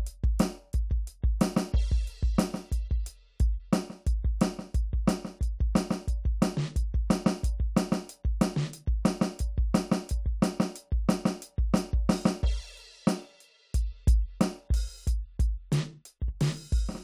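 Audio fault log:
2.75 to 17.03 s, crude rate conversion: from 2.75 s to the end, a gritty, inharmonic fizz rides under the music, roughly 35 dB below it, rising with loud and bright passages. The pattern fits a jump from 32 kHz to 44.1 kHz made by linear interpolation between neighbouring samples with no anti-imaging filter. The interpolation error repeats at a rhythm set by the ratio of the two rates, so it lands as shifted, inharmonic copies of the music.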